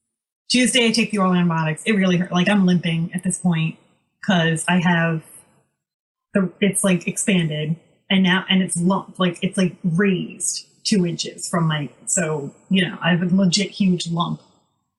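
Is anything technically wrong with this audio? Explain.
No, nothing is technically wrong.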